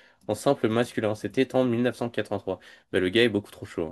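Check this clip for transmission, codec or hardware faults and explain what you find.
One hardware fault. From 0.42 s to the end, a fine hiss and roughness rides on the louder, brighter speech. This is sample clock jitter: timing wobble of a microsecond or two adds error roughly 40 dB below the signal.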